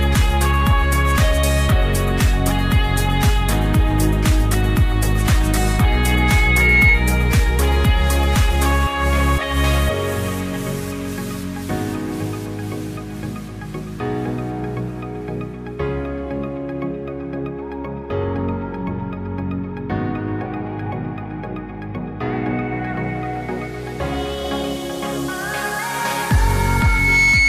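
A microphone picking up its own loudspeaker causes loudspeaker feedback squeal: a 2.2 kHz tone swells over about a second and a half from 5.52 to 7.03 s, then builds faster from 26.48 s to the end.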